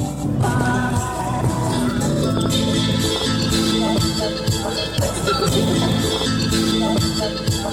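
Mains hum runs under the music from start to finish, a steady 60 Hz tone with low harmonics sitting about 15 dB below the programme. A ground loop or nearby transformer is coupling the power line into the signal path, leaving a constant low drone.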